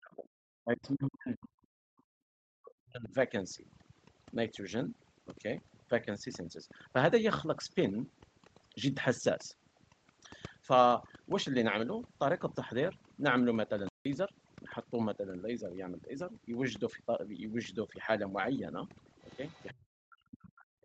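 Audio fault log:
Throughout: overdone noise removal. The background drops, with small twinkling specks left where noise was. The reducer cuts individual frequency bands whenever they sit close to its noise estimate. Quiet, low-level parts of the speech fall into that range and are removed with the noise. The top end stops at 8 kHz, which is normal for this call path.
0.0–0.34 s, 0.63–1.91 s, 2.27–3.13 s, 19.71 s to the end: speech suppressed in double talk. In each stretch the speech dips sharply, by about 40 dB at its deepest. The first three stretches cluster in the opening three seconds. The last runs to the end of the clip. Likely cause: both sides were talking, and the echo canceller turned everything down because it could not separate the talker from the returning echo.
0.83–0.91 s and 19.23–19.74 s: other side's voice leaking through. A faint second voice sits behind the speech, about 30 dB below it. 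The first is a brief scrap, and the second lasts about half a second. The later leak runs into the final suppression stretch at 19.71 s. The likely cause is that the far end's audio played on a loudspeaker and reached the microphone. The echo canceller then failed to remove all of it.
13.89–14.05 s: playback stall. The sound stops mid-flow for about 0.17 s of silence and then resumes. This gap is long enough to hear as a clear break, not a click. It likely happened because the player ran out of data or its thread was blocked, so the output had nothing to play until it recovered.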